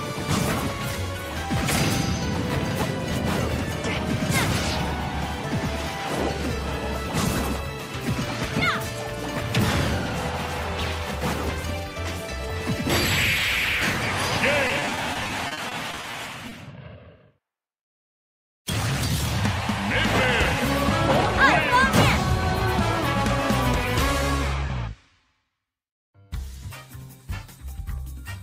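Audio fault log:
14.67–16.53 s, repeated packet loss (robotic sound): 16 separate holes open up in under two seconds, none longer than 40 ms. About 360 ms is covered by stretching the sound just before each hole, which repeats it and gives the stuttering, robotic quality. Another 260 ms is simply missing. The concealed share is 19% of the stretch. Unlike a single dropout, these breaks come in quick succession, so the stretch sounds choppy rather than briefly interrupted.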